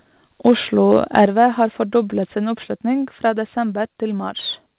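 Harsh, crackling edges on the loudest peaks at 0.46 to 0.52 s and again at 0.92 to 1.26 s point to microphone overload, likely an input volume set so high that the peaks ran about 2 dB past the converter's limit and had their tops sheared off. The whole signal, background included, then drops abruptly at 1.26 s by about 5 dB, and again at 2.28 s and 3.3 s by about 2 dB each. That pattern fits the microphone volume being stepped down, likely by call software reacting to the clipping and lowering the input level in single steps. Throughout, nothing is heard above 4 kHz, consistent with a narrowband call codec.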